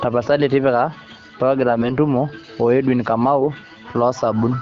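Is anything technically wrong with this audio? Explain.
Yes. From 1.68 to 1.95 s the speech turns hoarse, scratchy and gargly, though its pitch and loudness stay roughly in place. These are AMR bit errors. A few percent of the less protected bits in each frame arrive flipped while the checksum on the critical bits still passes, so the decoder accepts damaged frames. The excitation pulses land in the wrong positions and the fine pitch, gain and spectral values drift. The quarter-second span fits about a dozen 20 ms frames being hit. Around it, the underlying AMR-WB (HD Voice) coding stays clear, with only light codec colouring, which fits a rate around 12.65 kbit/s.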